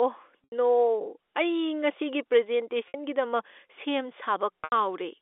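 Packet loss with pitch repetition occurs at 0.44 to 0.52 s, 2.88 to 2.94 s and 4.64 to 4.72 s, gaps of 80, 60 and 80 ms, each fitting a run of lost 20 ms packets. The receiver fills each hole by looping the last pitch cycle and fading it, so the speech briefly turns to a held, buzzy drone that sinks toward silence before normal speech cross-fades back, all within the narrow 300 Hz to 3.6 kHz telephone band of the G.711 A-law line.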